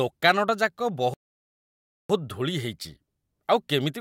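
At 1.14 s the speech just cuts out and the line goes dead silent until about 2.10 s, so you're sitting in a gap of roughly 0.96 s before it picks up again. That's a playback stall: the output had nothing to play for almost a second, most likely because the player's buffer ran dry or its thread got held up, and it only resumed once data was flowing again.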